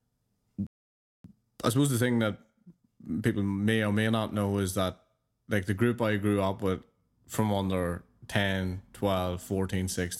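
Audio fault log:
0.67–1.24 s, playback stall: The player most likely ran short of buffered data or had its output thread held up. The speech cuts out in mid-flow and the output is completely silent for about 0.58 s. Then the sound comes back. The silence is a sudden drop rather than a fade, so it is clearly a gap in delivery and not a pause by the talker.
1.24–4.24 s, time-compressed catch-up: To recover the backlog left by the stall, the player trims out small slices of audio and cross-fades across each cut. For three seconds the speech runs about 1.1 times faster than normal, sounding hurried while its pitch stays where it was. Normal pacing resumes just before "know is that like".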